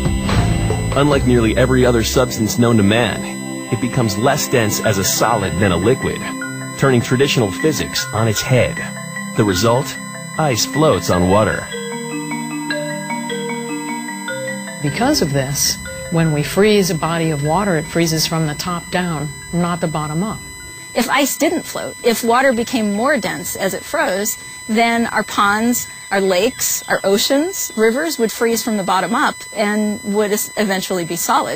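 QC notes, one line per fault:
throughout: USB whine. USB frame and microframe current leaks in through power or ground, adding a fixed-pitch whine at 1 kHz, strongest at 8 kHz, roughly 15 dB below the audio.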